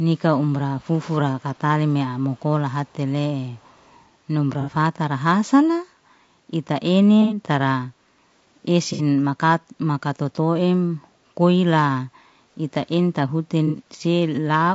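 Speech throughout has a rough, grainy texture, with noise filling the gaps between harmonics and a top band that sounds lowered and somewhat synthetic. The damage is plainly audible across the whole recording. This is low-delay AAC compression, likely AAC-ELD at around 32 kbps. The codec's short frames resolve pitch harmonics poorly, and at that rate there aren't enough bits to keep the voice clean. Three brief echo leaks appear at 0.75 to 0.98 s, 1.4 to 1.57 s and 3.54 to 3.82 s. Each is a faint, delayed copy of the voice trailing about 0.4 s behind the original. It is very quiet, roughly 30 dB below the speech in the first instance and fainter still in the other two, and it is heard as scraps rather than a sustained repeat. The likely cause is a far end playing the call over a loudspeaker whose echo canceller let part of the returning signal through. At 4.61 to 4.70 s, 7.22 to 7.37 s, 8.93 to 9.02 s and 13.67 to 13.75 s, short smeared, noisy patches interrupt the voice. 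Three of them last 60 ms and the one at 7.22 s lasts 90 ms. These are AAC frame loss with concealment. Frames went missing and the decoder filled the gap from the last good spectrum, which produces that blurred sound instead of silence. The lengths fit frames of about 30 ms each. Between 7.98 and 8.2 s the room background dips by about 6 dB for roughly a fifth of a second and then comes back. This is background gated by the echo canceller: while it judged the loudspeaker to be active, it turned the microphone down and released it once playback stopped.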